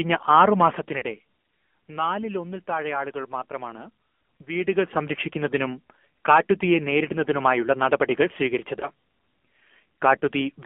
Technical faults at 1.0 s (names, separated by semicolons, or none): AMR narrowband mobile codec; lost AMR speech frames